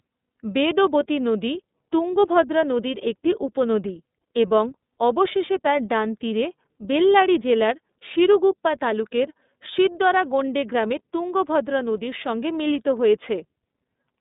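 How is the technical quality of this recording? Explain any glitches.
The recording has clearly audible codec damage from start to finish.

iLBC codec, throughout: each 30 ms frame's excitation is coded independently at a rate that fits the 13.33 kbps mode. The speech is confined to roughly 200 Hz to 3.7 kHz, with nothing above 3.8 kHz, so it sounds muffled, slightly rough and synthetic.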